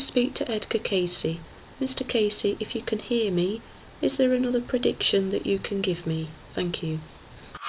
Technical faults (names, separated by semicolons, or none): none